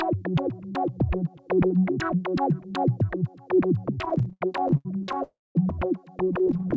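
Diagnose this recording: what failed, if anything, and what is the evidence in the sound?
Repeated stalls (stutter) at 4.02–5.21 s and from 6.25 s to the end: late packets kept emptying the jitter buffer, leaving smeared, repeated fragments up to 80 ms on the waveform.

Call audio freeze at 5.23–5.57 s: the sound hangs, fades, then drops to 0.21 s of flat silence on the waveform, likely a network hold-up draining the buffer.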